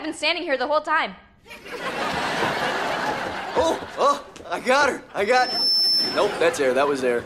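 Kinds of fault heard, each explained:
Loudspeaker feedback squeal: a 5.3 kHz tone swells over about 0.4 s into a squeal about 5 dB above the sound, as microphone and loudspeaker form a runaway loop.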